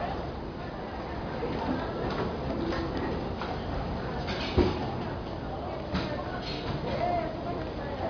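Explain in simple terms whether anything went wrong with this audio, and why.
The audio was converted to a much lower sample rate, likely about 11 kHz, without first removing the high frequencies it could no longer hold. This is aliasing. From start to finish, anything above about 5.5 kHz folds back into wrong, unrelated pitches, giving hissy and bright parts a gritty, metallic edge.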